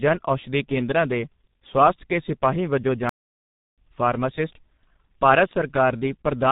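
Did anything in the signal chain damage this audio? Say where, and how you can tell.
Yes. Tandem speech coding runs through the whole clip, at the codec stage of the call path. The speech has the rough, muffled, warbling texture of a voice coded twice in sequence. That points to a chain ending in G.723.1 at 6.3 kbit/s after earlier G.726 and G.711 links. Each border decodes and re-encodes, so the low-rate coder compounds damage already left by the previous one.

A playback stall runs from 3.09 s to 3.78 s, right after "ਸਵਾਸਥ ਕੇ ਸਿਪਾਹੀ ਵਜੋਂ". The output drops to silence mid-flow for about 683 ms and then resumes. That abrupt gap within continuous speech marks it as a playback-stage fault rather than a pause in the talking. The likely cause is the player running short of data or having its output thread blocked until it recovered.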